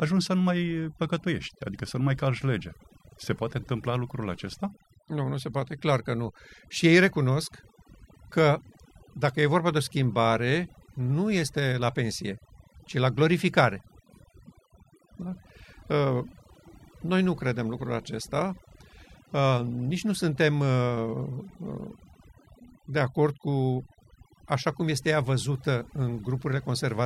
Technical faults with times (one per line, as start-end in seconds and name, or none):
0.00-27.06 overdone noise removal